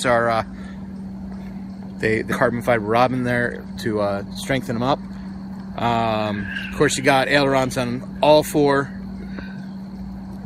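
At 2.31 s there's a skip ahead: roughly 0.4 s of audio just isn't there, and playback lands on later material with no gap at all. That fits the jitter buffer dumping a chunk once newer packets were already queued.

Right after, from 2.51 to 3.37 s, comes a jitter buffer speed-up at about 108%, trimming around 70 ms. It happens again from 4.26 to 5.32 s at 110%, shaving about 100 ms. Tiny pitch-period slices get cut, so the sound hurries along without any pitch change.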